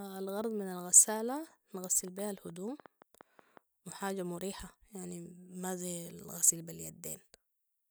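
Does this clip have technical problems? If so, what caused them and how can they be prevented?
Yes. A train of clicks runs from 2.08 to 3.58 s. About ten similar pops arrive unevenly, roughly five per second, about as loud as the speech. The likely cause is interference from nearby equipment or a faulty connection or power supply. To prevent it, move other equipment away from the recording cables and use a stable, well-connected interface.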